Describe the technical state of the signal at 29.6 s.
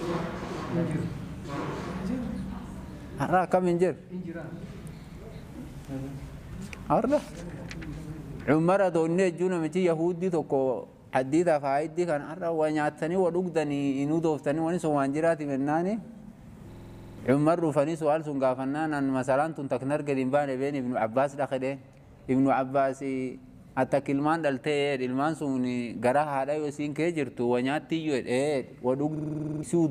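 At 29.6 s a system hang loop is running (29.16–29.63 s): one 46.44 ms chunk, which fits a 2048-sample buffer, repeats identically at 21.5 Hz, unlike a dropout's silence.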